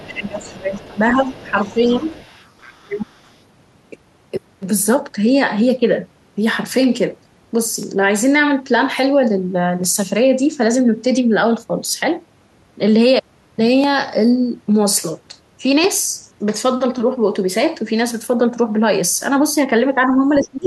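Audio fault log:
0.00–0.74 s, speech suppressed in double talk: the talker dips by roughly 15 dB, likely the echo canceller ducking both sides while the far end speaks.
0.00–2.83 s, other side's voice leaking through: a faint second voice, about 25 dB below the talker, likely loudspeaker echo the canceller didn't fully remove.
0.96–2.05 s, speech suppressed in double talk: a milder dip, around 5 dB, likely the same overlap making the canceller pull the talker down.
2.82–3.05 s, speech suppressed in double talk: a brief, deep cut of roughly 25 dB, likely from double talk confusing the canceller.
3.06–3.32 s, other side's voice leaking through: a very faint scrap of the far voice, about 40 dB down, likely leftover echo slipping past cancellation.
7.83–15.84 s, periodic USB or driver dropouts: about five tiny skips every 2 s, each around half a millisecond of lost audio, heard as regular ticks over the sound.
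20.06–20.14 s, speech suppressed in double talk: a short, slight dip of about 5 dB, likely the canceller reacting to both sides talking.
20.30–20.66 s, speech suppressed in double talk: the talker drops roughly 20 dB through to the end, likely the canceller ducking during overlap.
20.34–20.66 s, other side's voice leaking through: the far voice comes in fairly clearly, about 15 dB under the talker, likely echo the canceller missed.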